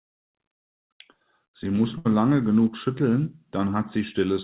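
At 1.98 s a burst of packet loss interrupts the speech until 2.07 s. Packets were lost or arrived too late to play. The receiver held the last sound for 72 ms, fading it into a brief buzz or hiss. Speech then resumes with 80 ms skipped.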